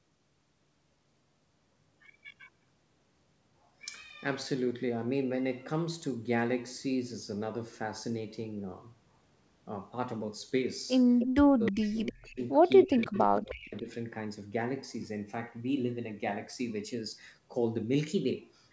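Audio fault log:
11.19–11.36 s, 11.65–11.89 s, 12.06–12.11 s and 12.83–13.82 s: echo leak. A faint, delayed copy of the speech comes back about 0.31 s after the original. It arrives in short scraps at first, then as a longer stretch near 13 s. It sits roughly 10 to 25 dB below the main speech. The likely cause is a loudspeaker at the far end whose echo canceller missed part of what its microphone picked up. That leftover was sent back down the line.
11.43–12.41 s and 12.86–13.88 s: speech suppressed in double talk. The main speech sinks sharply, by up to around 30 dB in the first stretch and around 25 dB in the second. It is held down for roughly a second and then for well over half a second. Both stretches overlap the returning echo. This is likely an echo canceller that heard two signals at once, could not tell its own talker from the echo, and pulled both down.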